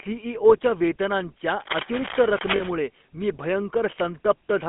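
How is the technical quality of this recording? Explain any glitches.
The recording has clear technical problems: narrowband, codec-coloured speech throughout, a burst of scratching in the middle, and a short dropout inside that burst.

GSM full-rate codec, throughout: the speech sits in a 200 Hz to 3.5 kHz band with a buzzy, gravelly roughness. That texture comes from pulse-driven vocal-tract modelling and fits a 13 kbps GSM link, unlike plain band-limiting, which stays smooth.

Cable scratch noise, 1.60 to 2.73 s: dense, uneven rustling bursts nearly as loud as the speech. They likely come from a worn cable or connector being moved. Its irregular grain sets it apart from steady hiss.

Lost GSM frames, 2.56 to 2.62 s: about 40 ms is replaced by a held, metallic ring, which fits two dropped frames. The tonal repetition distinguishes it from the noisy scratching around it.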